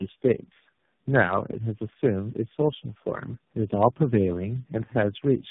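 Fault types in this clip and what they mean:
Tandem speech coding: the speech passed through four speech codecs in a row, G.729A, AMR-NB twice and G.726, with G.711 links between them. Each one re-coded the last one's errors, so it sounds rough, muffled and warbly. A spectrogram shows smeared, blurred formants and nothing above 3.8 kHz.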